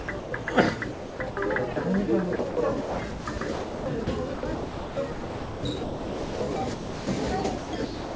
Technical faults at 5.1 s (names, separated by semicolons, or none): sound chopped by the voice detector